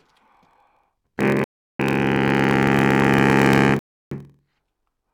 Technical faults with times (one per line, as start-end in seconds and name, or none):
0.00-5.13 block size mismatch (padded)
1.44-1.79 rebuffering stall
3.79-4.11 rebuffering stall